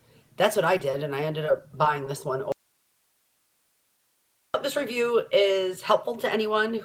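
At 0.77 s there is a short concealed packet loss. About 20 ms of audio never arrived. The receiver filled the hole by extending the preceding sound, then blended back in by 0.81 s. It comes across as a brief smear, and that moment's content is gone.

At 0.91 s comes a short stall from a late packet. The packet arrived 20 ms behind schedule, so the jitter buffer emptied. The receiver held the last sound for 20 ms until 0.95 s, then resumed where it left off. Nothing is lost, but the sound is stretched.

From 2.52 s to 4.54 s the audio drops out to a faint residue. The signal cuts off abruptly and returns just as suddenly, about 2 s later. Only hiss remains in the gap, roughly 45 dB below the normal level. The likely cause is a loss of the wanted signal while the path after the break stayed live.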